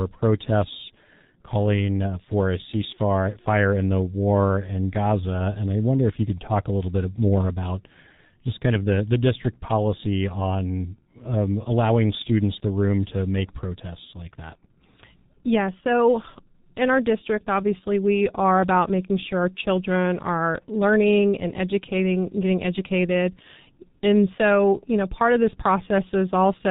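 From start to finish the speech has that G.723.1 codec sound. Everything above 4 kHz is simply gone, so the voice comes out muffled, and the heavy coding leaves it hoarse and grainy. The codec chops the signal into 30 ms frames and refits its voice model only once per frame, so fast consonants get smeared together. The thinness fits a rate around 6.3 kbit/s, the higher of this codec's two rates.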